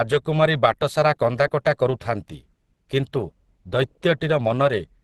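Right through the speech there's plainly audible Opus compression: it's muffled and hoarse, nothing above about 12.1 kHz, likely a low-bitrate hybrid-mode encode around 16 kbps.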